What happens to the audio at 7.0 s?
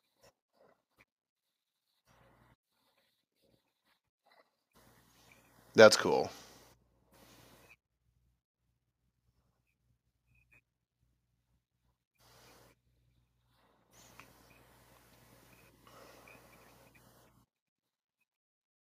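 Nothing goes wrong at 7.0 s; the speech there plays through cleanly, with no dropout, click, distortion or other fault.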